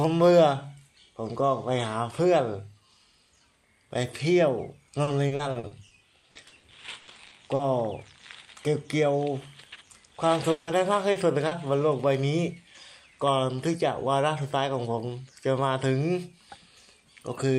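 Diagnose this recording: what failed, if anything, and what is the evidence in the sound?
Repeated packet loss (robotic sound), 5.03 to 7.62 s, network stage. Across this stretch the audio keeps breaking into a choppy texture with pieces missing as one hole follows another, the longest about 80 ms. Together they add up to 640 ms, roughly a quarter of the span. The receiver patches each missing piece by extending the preceding sound. Those repeated synthetic fills between short runs of real audio produce the robotic quality.

At 10.51 to 10.70 s there is a 160 ms stretch where the sound is replaced by a continuation of what came just before, an extension that never drops all the way to silence before real audio resumes. The likely cause is a long network dropout. Nothing arrived at the receiver for that interval, so it kept synthesising from the last good audio, and that portion of the original is simply gone.

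Short concealed packet loss at 11.11 to 11.18 s and 11.47 to 11.54 s, network stage. Each is a brief smear or wobble where about 40 ms of audio failed to reach the decoder in time. The gap was bridged by carrying forward the previous sound's pitch or noise character, then crossfading back into the real signal. Because the fills are this short, they read as momentary blurs.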